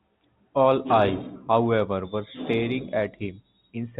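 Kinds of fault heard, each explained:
No faults can be heard in this speech clip. It comes over a G.711 A-law telephone path at 64 kbps, so nothing above 4 kHz reaches the ear, and any quantisation noise riding under the signal is faint at most.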